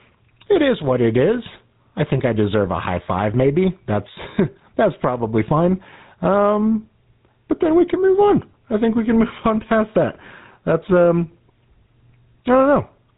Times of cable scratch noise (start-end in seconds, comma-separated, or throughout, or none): none